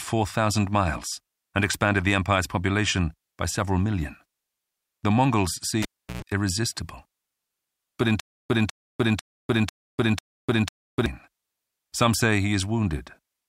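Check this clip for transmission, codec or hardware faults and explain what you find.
Two faults are audible in this speech clip: a cable disconnection and a stalled-playback stutter.

From 5.82 to 6.22 s there is a cable pulled and plugged in. A pop marks the break, followed by about 348 ms with the signal path open and near silence. As the plug is pushed back, only the tip makes contact at first, so about 108 ms of 60 Hz mains buzz leaks in before the sleeve seats. A second pop follows as the sound returns.

From 8.2 to 11.06 s there is a stutter with silent gaps. A 197 ms fragment plays, then about 299 ms of dead digital silence follows. The cycle repeats every 497 ms, five times over. The even spacing likely comes from a stalled player or stream that replays its last buffered fragment at each retry, then runs dry. Whatever should have played during that stretch is missing.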